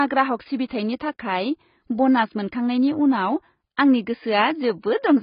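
Speech, carrying heavy AAC compression damage from start to finish. Nothing is present above about 5.1 kHz, so the audio sounds dull and boxed in. Consonants lose their edge. The damage points to AAC-LC at a very low bitrate, which fits roughly 16 kbps. At that rate the encoder has too few bits for the frequency lines in each frame. It drops the top band entirely and quantises the rest coarsely, which is likely the cause of the smeared sound.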